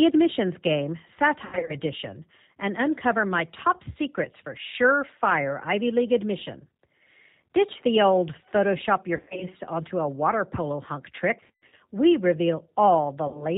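Throughout, the G.729 codec's 8 kbit/s CELP coding cuts everything above 4 kHz and leaves the speech plainly rough and synthetic. VoIP packet loss concealed by the speech codec hits at 1.45–1.75 s, 9.17–9.47 s (before "onto a water polo"), 11.40–11.74 s (after "a water polo hunk") and 13.28–13.46 s. Each time the decoder extrapolates lost frames into a fading buzzy tone or coloured noise, with runs up to 100 ms.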